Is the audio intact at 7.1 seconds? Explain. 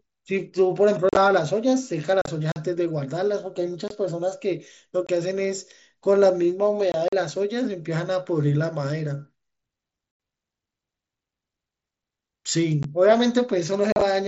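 No. A block of digital silence runs from 7.08 to 7.13 s, a gap of about 43 ms that fits a 2048-sample buffer left unfilled. It sounds like a short hole where the sound cuts out and back abruptly. The waveform shows a flat, near-silent stretch, and the spectrogram shows a blank vertical strip.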